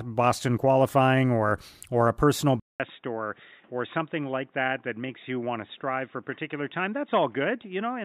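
At 2.60 s the speech drops out for about 0.2 s. When it returns, it sounds dull and boxy. Nothing remains above 3.8 kHz. The level falls slightly, and a faint new background noise sits well below the speech. This lasts to the end of the clip. The likely cause is an input switched to a poorer device mid-recording, such as another microphone or a headset's call profile with a narrower band and its own noise.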